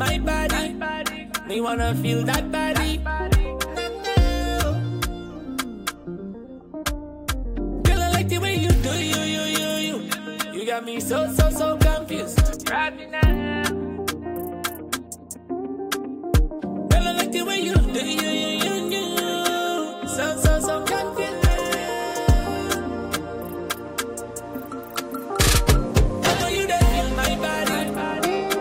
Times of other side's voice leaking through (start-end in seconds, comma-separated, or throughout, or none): none